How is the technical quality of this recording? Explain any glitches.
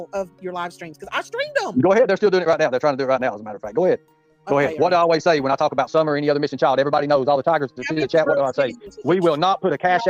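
No glitches to report; the recording holds steady throughout with no audible technical faults.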